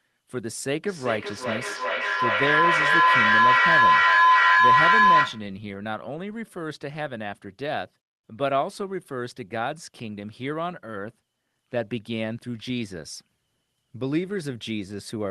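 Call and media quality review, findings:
Feedback howl, 0.85–5.56 s: tone around 1 kHz builds to about 11 dB above speech level, with repeats roughly every 0.4 s. Probable component: a second device on the call in the same room; mic-to-speaker loop gain exceeds unity and regenerates until the loop breaks. Call path underneath sounds band-limited near 12 kHz with codec texture, consistent with Opus at a modest bitrate.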